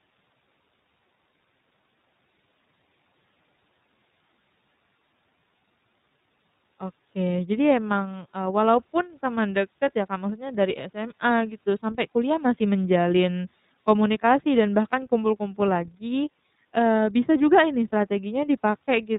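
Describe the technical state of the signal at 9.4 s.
At 9.4 s the speech carries the iLBC codec, present across the whole clip: nothing passes above 4 kHz, and each 30 ms frame is coded on its own, fitting the 13.33 kbps mode. Unlike plain telephone band-limiting, this adds a plainly audible rough, synthetic grain.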